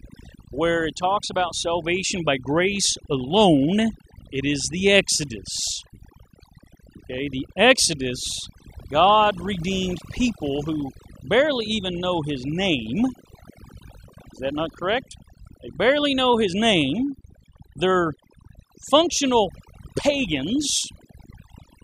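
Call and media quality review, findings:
Noise suppressor over-aggressive throughout; bands near noise estimate gated out with quiet speech detail. Overdone noise removal: twinkling specks over near-silent background.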